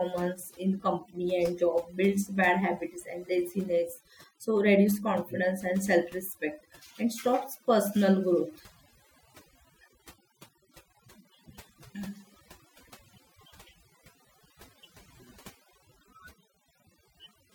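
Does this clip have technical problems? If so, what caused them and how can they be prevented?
Yes: overdone noise removal throughout, with noise reduction set too hard, gating bands near the noise floor, leaving twinkly near-silence. Use gentler reduction settings.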